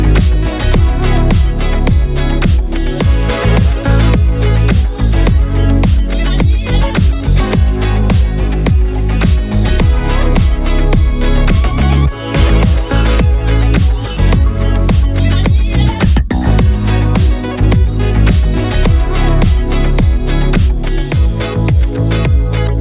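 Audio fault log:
No faults detected in playback.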